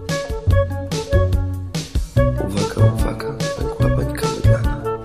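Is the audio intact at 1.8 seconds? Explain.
Yes, the music plays through cleanly at 1.8 seconds, with no dropout, click, distortion or other fault at that moment.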